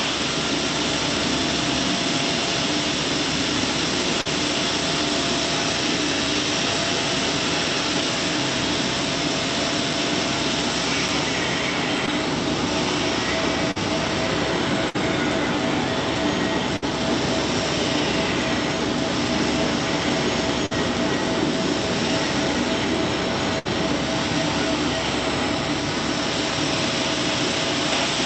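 At 4.21 s the first short concealed packet loss appears. About 40 ms of audio failed to reach the decoder in time, and the receiver bridged the hole with roughly 39 ms of extrapolated sound, continuing the preceding pitch or noise shape before cross-fading back into the real signal. The result is a brief smear lasting about 0.06 s.

A block of digital silence falls at 7.67 s. For 0.75 ms the sound cuts out and returns with no fade, and being so short it is heard as a tick or dip rather than silence. A longer block of digital silence at 11.08 s lasts 4.35 ms and is likewise heard as a tick or dip, which fits an output buffer that went unfilled in time.

Short concealed packet loss returns at 12.06 s, covering a 20 ms gap with about 14 ms of fill, and at 13.71 s, covering 40 ms with about 44 ms. Both are heard as a brief smear or wobble where the synthetic continuation joins the real signal.

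Burst of packet loss begins at 14.90 s, followed by 16.76 s, 20.66 s and 23.59 s. Each time 40 to 60 ms of consecutive packets went missing. The receiver held the last sound for 48 to 64 ms while fading it down, giving a short held buzz or fading hiss before the audio resumes further along with the intervening material gone. Throughout, the call codec's upper limit near 8 kHz dulls the top end.

A final block of digital silence at 27.39 s is 1.18 ms long and is heard as one more tick or dip.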